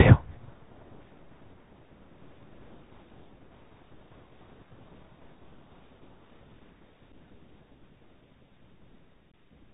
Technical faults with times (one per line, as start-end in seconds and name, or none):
0.00-9.73 Bluetooth CVSD headset codec
7.12-7.14 unconcealed Bluetooth headset packet loss
9.31-9.34 unconcealed Bluetooth headset packet loss